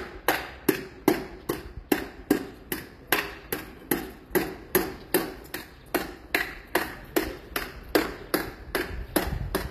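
From start to end, the treble sounds gritty and metallic. Nothing reaches above 14.9 kHz. This is likely HE-AAC compression. The top band is rebuilt from copied lower bands and no longer lines up. The damage is plain, fitting a bitrate near 24 kbps.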